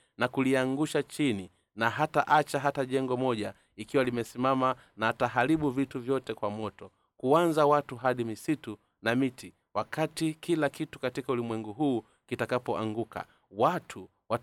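No technical faults can be heard anywhere in the recording.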